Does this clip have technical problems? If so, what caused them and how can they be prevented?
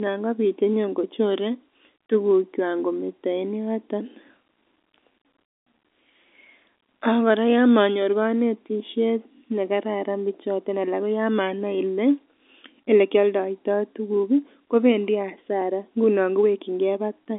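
No, there are no technical problems to report in this speech clip. It carries the sound of G.711 telephone coding working as intended, with a narrow line band of roughly 150 Hz to 3.6 kHz and nothing above about 3.8 kHz, which fits a 64 kbps mu-law telephone path.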